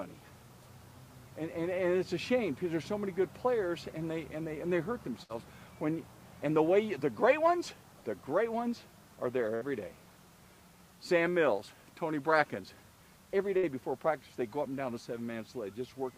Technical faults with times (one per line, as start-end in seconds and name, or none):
5.23-5.32 burst of packet loss
9.55-9.64 burst of packet loss
13.57-13.66 burst of packet loss